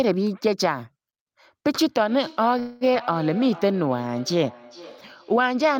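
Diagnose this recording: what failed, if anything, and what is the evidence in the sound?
Call processing failed first: from 1.81 s to the end, the speech comes back at a steady interval of roughly 400 ms, peaking about 18 dB below the direct sound. That's feedback echo between two devices. A second device in the room is replaying this call, and its sound reaches the microphone again. The local echo canceller only subtracts what its own device plays, so it never removes this path and the repeats survive.

At 2.59 s the sound stalls into a fading continuation of the last sound for about 215 ms, until 2.84 s, then picks up exactly where it left off with nothing lost. That's a call audio freeze, likely the network holding packets up long enough that the jitter buffer ran dry. The receiver improvised filler to cover the wait, and the result is an inserted gap rather than missing audio.

Just after, at 2.93 s, playback jumps ahead: roughly a tenth of a second of sound is gone, stitched over with only about 8 ms of smoothing. 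That's a skip ahead. A chunk was dropped, either in transit or by the buffer overflowing while later audio was already waiting, so the two sides of the jump meet almost directly.

From 3.40 s to 4.45 s the audio drags, running at about 89% speed with the pitch unchanged and sounds stretched out. That's the jitter buffer slow-down. The receiver was rebuilding its reserve by repeating individual pitch periods and slivers of pauses, adding about 117 ms in total. This is the network stage again, with the playout logic compensating for its thin margin.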